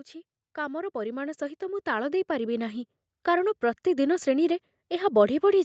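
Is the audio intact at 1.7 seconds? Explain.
No. At 1.7 seconds the automatic gain control is partway through a gain rise. It judged the input too quiet and has been steadily increasing its gain since 0.55 seconds, climbing about 12 dB in total before settling at 4.21 seconds. Because the whole signal is amplified together, the speech and the background noise behind it swell as one, growing louder gradually over those several seconds.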